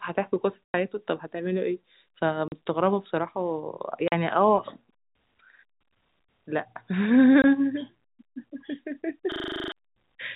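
A speech clip carried over a telephone path, band-limited to 4 kHz by G.711 coding. It has two faults. The first is packet loss filled with silence. Holes fall at 0.65 to 0.74 s, lasting 100 ms, then at 2.48 to 2.52 s and 4.08 to 4.12 s, each 40 ms, and at 7.42 to 7.44 s, lasting 20 ms. Every gap is a multiple of 20 ms, which fits 20 ms packets. The receiver played nothing where packets went missing. Each hole starts and ends abruptly. The second fault is a system hang loop, from 9.32 to 9.72 s. One 40 ms slice of audio repeats ten times, at 25 Hz. It sounds like a rapid stutter bordering on a buzz. The computer stalled while the sound hardware kept replaying the same buffer. Around 400 ms of real audio is lost in its place.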